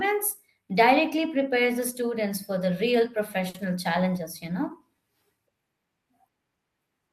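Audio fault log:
3.49 to 3.56 s, short stall from a late packet: right here the speech hangs for a moment. One packet showed up late, the jitter buffer ran dry, and the receiver kept stretching the last bit of sound for about 50 ms until the packet arrived, then carried on from the same spot. Nothing's actually lost. You just hear that sound held a touch too long, maybe with a faint buzz or dip, and everything after it lands about 50 ms later.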